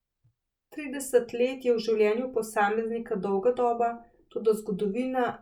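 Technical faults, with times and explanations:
No technical faults can be heard in this speech recording, and the signal stays intact and continuous for its whole length.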